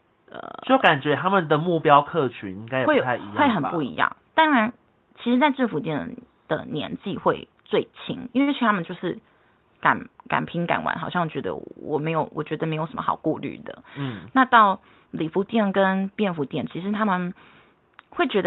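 At 8.41 s to 8.50 s the speech briefly holds one sound too long, with a faint buzz or dip before it carries on. This is a short stall from a late packet. The jitter buffer ran empty, so the receiver stretched the last sound by 57 ms, then resumed from the same point. Nothing was lost, but the delay grew by 57 ms.

From 12.81 s to 13.24 s the speech runs at 110% speed with unchanged pitch, sounding hurried. This is a jitter buffer speed-up. The buffer held more audio than its target, so the receiver cut many short, pitch-period-sized pieces, about 50 ms in total, to bring the delay back down.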